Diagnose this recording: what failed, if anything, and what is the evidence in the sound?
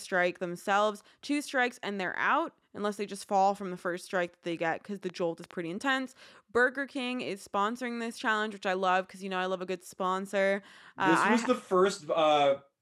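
Something is likely coupling interference into the analogue wiring or straining the interface, producing a train of clicks from 4.52 to 5.52 s, right after "the first strike that". About five similar pops arrive unevenly at roughly 4 per second, peaking around 5 dB above the speech.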